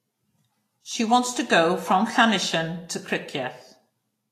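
Speech runs the whole way with plainly audible Vorbis compression. Nothing sounds above 14.2 kHz. The treble turns hissy and grainy, and consonant attacks blur. This is likely low-bitrate Vorbis coding, which fits roughly 33 kbps.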